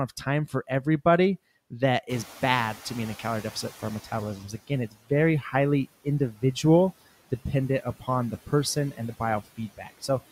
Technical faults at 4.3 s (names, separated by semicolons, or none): noise suppressor catching up; speech cut by the noise suppressor